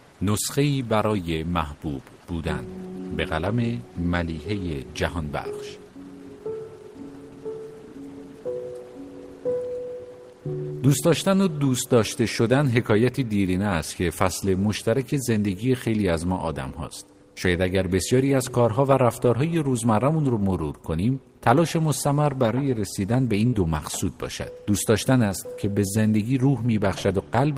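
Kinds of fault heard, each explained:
Burst of packet loss: Between about 23.47 and 23.55 s, a short run of audio data failed to arrive in time for playback. The receiver filled the hole by stretching out the last sound it had and fading it down. That patched stretch lasts about 56 ms and is heard as a smeared, dying continuation. The audio then resumes with about 60 ms of the original skipped.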